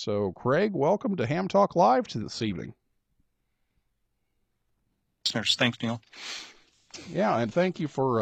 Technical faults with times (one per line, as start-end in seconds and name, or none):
2.20-8.21 adaptive stream at a lower bitrate